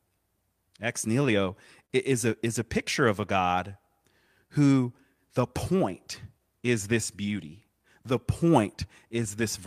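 A speech clip with a timing problem running all the way through: clock drift between sender and receiver, with the sender's clock running roughly 3 percent slow compared with the receiver's. Because the far end delivers audio a little more slowly than it's being played out, the jitter buffer keeps draining, and the receiver has to keep patching things up. You hear that as small, irregular timing hiccups scattered across the clip rather than one obvious glitch. The first clear casualty is a short stall from a late packet at about 1.86 to 1.93 s. A packet didn't turn up in time, the buffer ran dry, and the receiver held the last bit of sound for about 41 ms until the data arrived, then carried on from the same point. Nothing is actually lost, but that moment sounds slightly stretched, with a faint buzzy or dipped quality. From about 3.42 s to 9.24 s you get repeated timing corrections, which is the receiver steadily compensating for that slow clock by repeating short slivers of audio. 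The effective playback rate sits around 97 percent, and the padding adds up to something like a fifth of a second over that stretch. The edits all push the same way but land at uneven spacing.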